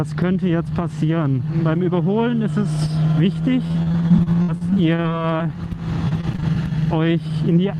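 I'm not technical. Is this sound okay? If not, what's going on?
No, there are two rough patches of repeated packet loss (robotic sound), from about 3.67 to 5.47 s and again from 6.09 to 6.44 s. Bits of the audio went missing in transit over and over, and each hole got papered over by stretching the last bit of sound, the longest about 62 ms. You hear that as choppy, robot-like sound with little pieces gone.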